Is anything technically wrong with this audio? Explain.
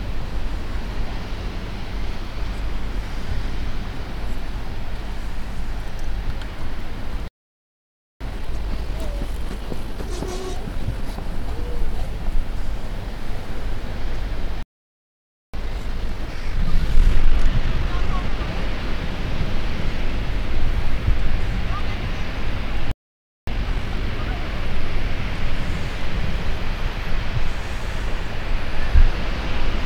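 Yes, there are two linked problems. First, playback stalls: the audio drops to silence at 7.28 s for about 0.93 s, at 14.63 s for about 0.91 s, and at 22.91 s for about 0.56 s, then picks up again. That's likely the player running dry or its thread getting blocked.

Each stall is followed by time-compressed catch-up, where the player trims tiny slices and cross-fades them to clear the backlog. It runs 1.1x from 8.21 to 11.21 s, 1.25x from 15.54 to 18.54 s, and 2x from 23.47 to 24.03 s. Each one sounds hurried at normal pitch.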